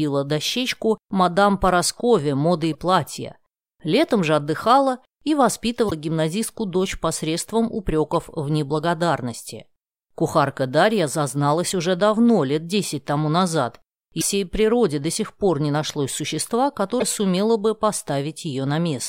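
Short bursts of damaged data in a compressed stream interrupt the speech at 2.73–2.75 s, 5.87–5.92 s, 8.11–8.14 s, 14.17–14.23 s and 16.97–17.03 s, each lasting 20 to 60 ms. Corrupted bytes leave the decoder unable to read those frames, so it loses sync until it finds a valid header. The result is a brief chirp, squawk, click or short hole.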